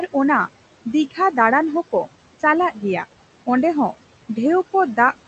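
Noise suppressor artifacts run through the whole speech clip. Frame by frame, the suppressor drops bands it judges steady by about 17 dB, so the room noise ducks between phrases and swells back under them, within the 8 kHz call bandwidth.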